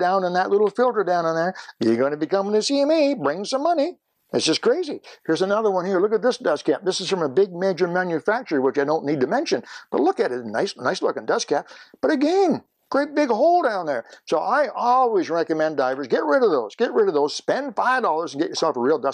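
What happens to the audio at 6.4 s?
Nothing goes wrong at 6.4 s; the audio carries on intact through that moment.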